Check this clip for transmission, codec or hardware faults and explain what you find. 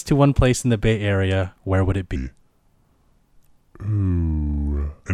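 There's one fault here, a section at the wrong speed. From about 2.16 s, right after "where would it", through to the end of the clip, the speech drops to 0.78 times its proper rate. Pitch falls with it, by about four semitones, so the voice suddenly turns deeper and more drawn out. Speed and pitch sliding together like that points to the section likely being replayed against the wrong clock rather than any deliberate pitch effect.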